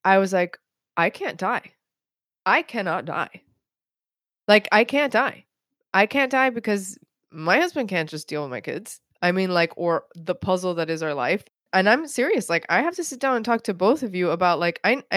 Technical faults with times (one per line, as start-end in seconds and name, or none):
none